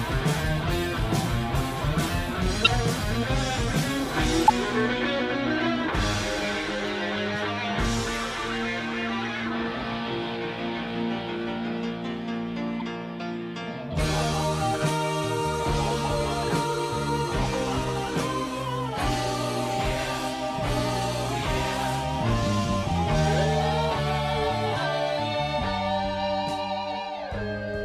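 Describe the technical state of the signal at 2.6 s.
At 2.6 s there is a short, harsh chirp-like burst of noise from 2.64 to 2.68 s, with its error peaking around -5 dBFS. This is a corrupt frame decoded: bit errors damaged roughly two consecutive compressed frames, and the decoder rendered them anyway. Misread gains and spectral codes put strong energy at wrong frequencies for the roughly 40 ms those frames cover, producing the brief squeak.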